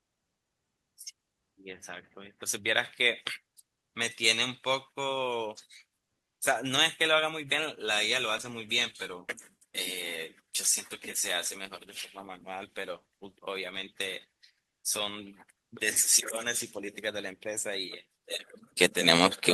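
From 8.25 s to 16.23 s the speech goes through a call bitrate drop. The call's bandwidth estimate fell and the encoder was told to spend far fewer bits, so detail is coded coarsely and the top end is cut off, leaving the speech muffled and watery. The degradation fits a fall from 64 kbps to about 19 kbps, held at its worst for about 5.2 s. Unlike packet loss, there are no gaps or glitches.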